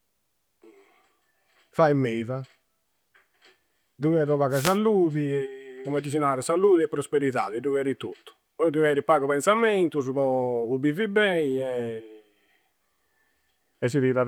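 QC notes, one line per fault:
4.50–4.78 s, wireless microphone noise hit: a brief swish of static over the speech as the FM radio link fades and receiver noise rises through it.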